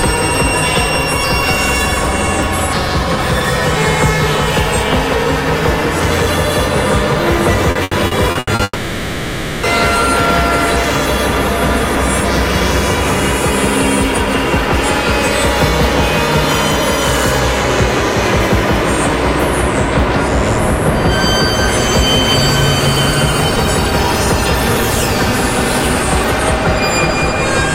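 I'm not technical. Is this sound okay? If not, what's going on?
No. From 7.71 to 8.62 s there is repeated packet loss, which makes the sound choppy and robotic. Six short pieces of audio went missing, the longest about 80 ms, and each gap was patched by stretching the previous sound. About a third of that stretch is patched-over audio.

Right after, from 8.63 to 9.66 s, the sound turns into a fading buzz or hiss with a brief moment of silence, and about a second of audio is simply gone. This is likely a long network dropout, where nothing arrived and the receiver filled in until the stream resumed.

From 17.40 to 18.40 s there is a channel delay causing comb filtering. One side arrives roughly one sample late, and combining both sides cancels some frequencies. Here the cancellation sits very high, near 20 kHz, so it mainly takes some airiness off the top.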